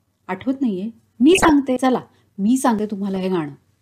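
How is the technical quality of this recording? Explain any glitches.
The recording has clear technical faults: two bursts of DAB burbling and two abrupt skips in the speech.

DAB burbling occurs from 1.33 to 1.50 s and again from 3.16 to 3.24 s. Weak reception lets bit errors, a few tenths of a percent here, slip past error correction into the MP2 data. Corrupted samples put short blips of noise into single sub-bands, and corrupted scale factors make sub-bands jump in level for up to a frame, laid over the speech.

At 1.77 s and 2.79 s the speech jumps forward with no gap of silence, roughly a tenth of a second missing each time. This is likely a dropped buffer (overrun): the software failed to collect samples before the hardware overwrote them, so the lost stretch vanished and the audio on either side was butted together, leaving the abrupt jump.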